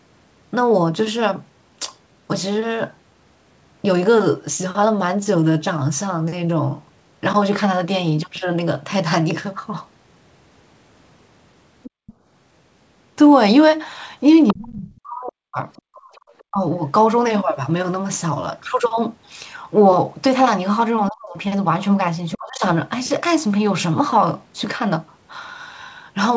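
A speech recording over a call link, with nothing above 8 kHz, which fits a wideband call codec such as G.722. The echo canceller likely failed to remove the loudspeaker signal, so the other side's voice leaks through, around 15 to 20 dB under the talker, at 11.83–12.13 s, 14.47–16.43 s and 21.07–22.34 s. The canceller also gated the background, dropping the room sound by about 39 to 40 dB in brief dips at 11.90–12.24 s and 15.88–16.11 s. With both sides likely talking at once, speech is suppressed in double talk, and the talker's voice dips by up to roughly 40 dB at 14.53–16.64 s and 21.09–22.63 s.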